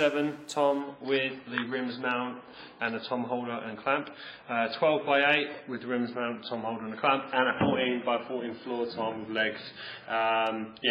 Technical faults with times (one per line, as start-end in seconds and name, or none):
0.80-10.90 adaptive stream at a lower bitrate